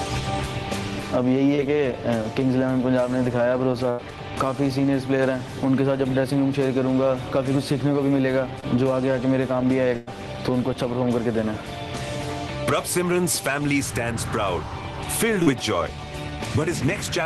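Short concealed packet loss occurs at 1.55 to 1.60 s, 8.60 to 8.64 s and 15.43 to 15.48 s in this audio, each a brief smear or wobble where the network call dropped a sliver of sound, about 20 ms at the first two and 40 ms at the third. The decoder covered each hole by extending the preceding sound for roughly 20 to 35 ms, then crossfaded back into the real signal, so a short transient can disappear. A burst of packet loss hits at 3.90 to 4.00 s and again at 9.96 to 10.09 s, where about 80 ms and then 100 ms went missing in a row. The receiver kept synthesising the last sound and let it decay, so it becomes a held buzz or fading hiss rather than dropping to silence. The signal then picks up further along, with the stretch in between gone.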